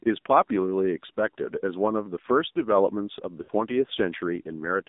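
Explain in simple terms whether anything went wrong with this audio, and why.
Yes, two things went wrong. The whole clip carries the sound of the AMR narrowband mobile codec, an old phone-network speech format. Everything above about 3.7 kHz and below 200 Hz is gone. The voice sounds thin, muffled and noticeably buzzy, like a poor mobile call.

At 3.42 s there are lost AMR speech frames, lasting until about 3.51 s. Radio errors corrupted a short stretch, roughly 60 ms, which fits three missing 20 ms frames. The decoder fills the gap by repeating its last good sound while fading it. You hear a brief smeared warble and dip.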